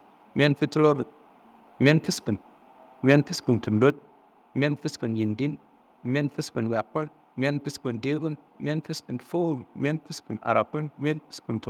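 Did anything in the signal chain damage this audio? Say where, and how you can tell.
Yes. Microphone overload at 1.86–1.92 s and 3.09–3.16 s: the loudest syllables turn harsh and crackly, with peaks driven about 3 dB past full scale and a small share of samples flattened. That points to input gain set too high, likely clipping at the converter.

Microphone volume stepped down at 3.9 s: speech and background both fall by about 5 dB in a single step, shortly after the second distorted peak. That fits call processing detecting the clipping and lowering the device's input gain.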